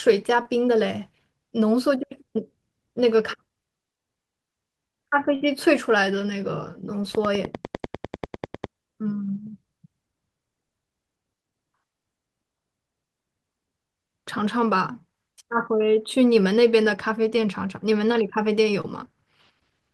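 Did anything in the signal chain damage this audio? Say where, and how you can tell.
Yes. The damage is at the network stage, with a separate problem earlier in the chain.

Short concealed packet loss occurs four times: 0.42 to 0.46 s, 7.02 to 7.04 s, 14.93 to 14.95 s and 18.81 to 18.85 s. The gaps are about 10 to 30 ms. Each one is heard as a brief smear or wobble in the speech. The packets arrived too late or not at all. The receiver then bridged the hole by extending the preceding sound and blending back into the real audio.

A burst of packet loss hits at 5.35 to 5.42 s. About 60 ms of speech is gone. The receiver kept the last sound going for roughly 58 ms while turning it down, so it sounds like a held buzz or fading hiss. Then the speech jumps ahead, with the part in between missing. This is several lost packets in a row, a network fault and not a recording one.

A train of clicks runs from 7.15 to 8.65 s. 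The ticks come at a regular 10 per second, around fifteen in all, and peak at about 10 dB above the speech. They have much the same shape and keep going over the talking. This points to the analogue wiring or converter stage. The likely cause is interference from nearby equipment or a faulty connection or power supply.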